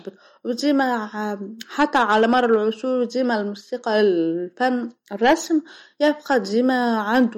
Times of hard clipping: 1.79-2.56, 3.95-4.04, 5.24-5.34, 7.14-7.22

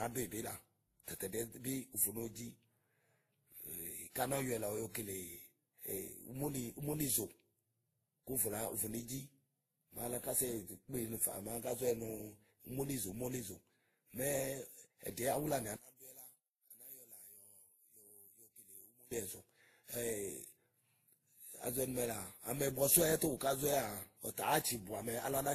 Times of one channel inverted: 15.76-19.11

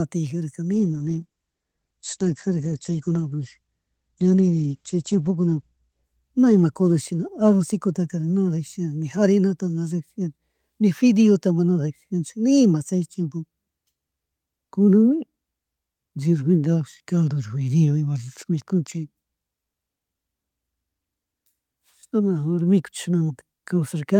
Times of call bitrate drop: 0.72-10.11

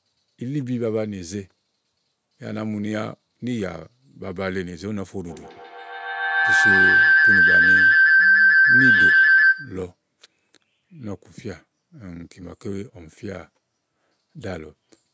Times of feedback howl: 5.27-9.90

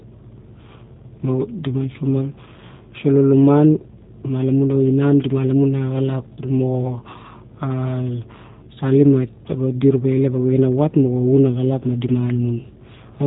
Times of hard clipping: none

